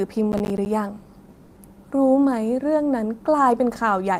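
From 0.32 to 0.66 s the speech carries processor overload crackle: a gritty tearing made of many tiny dropouts. Missed processing deadlines each left a short silent hole, roughly ten of them, which fits buffers of around 10 ms, and the hard edges crackle.

At 1.30 s a short stall from a late packet begins. A packet missed its slot, so the receiver stretched the last sound for 40 ms until it arrived, then resumed where it stopped. Nothing is lost, but that moment is held too long with a slight buzz or dip, leaving everything after it about 40 ms later.

Straight after, from 1.36 to 1.58 s, comes a call audio freeze. The sound is carried on as a fading synthetic buzz or hiss for 200 ms without ever going silent, then the speech picks up from the same point with nothing missing. The likely cause is packets held up in transit, draining the jitter buffer.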